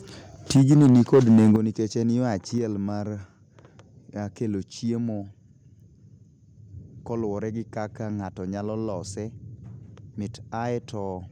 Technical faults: microphone overload; microphone volume stepped down

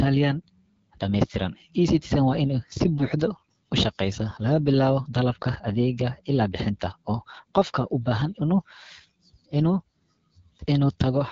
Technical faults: AMR wideband (HD Voice) codec

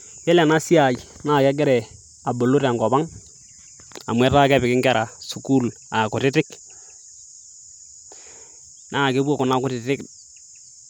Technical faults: none

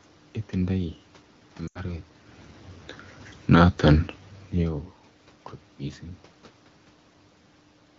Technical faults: lost AMR speech frames

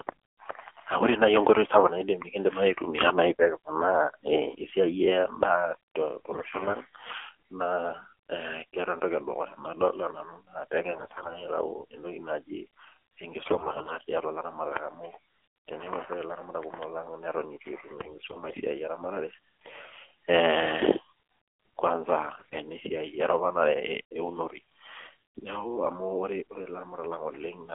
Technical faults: AMR narrowband mobile codec; AMR bit errors

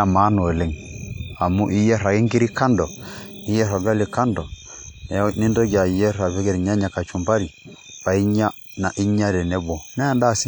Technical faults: WMA compression

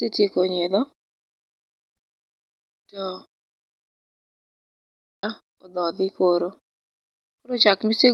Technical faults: long network dropout; jitter buffer speed-up

